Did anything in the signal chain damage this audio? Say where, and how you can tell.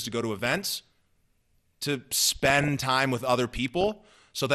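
Yes, at the codec stage. Throughout the clip the speech sounds dull and gurgly, with a granular roughness. This is likely MP2 compression at a low rate, consistent with around 80 kbps. Layer II splits the signal into 32 sub-bands and, when bits run short, shuts off the upper ones and coarsely quantises the rest. On a spectrogram the top end shows a flat ceiling with blocky patches flickering on and off frame by frame.

Further damage occurs in transmission: DAB burbling at 0.46–0.81 s, 2.13–2.84 s and 3.78–3.98 s. Weak reception let bit errors, at a rate well under one percent, slip past error correction into the MP2 data, corrupting samples, which put short blips of noise into single sub-bands, and scale factors, which make sub-bands jump in level for up to a frame. A spectrogram shows isolated bright rectangular bursts confined to narrow bands, and the waveform shows brief envelope spikes.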